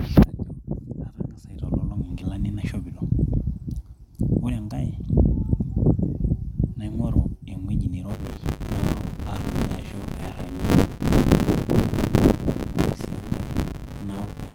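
From 8.08 s to the end, buffer tearing sets in: writer and reader have slipped, so close to a third of each 10 ms period replays speech a few tens of milliseconds stale, giving a 100 Hz rattling buzz. Unlike mains hum, it disappears in pauses.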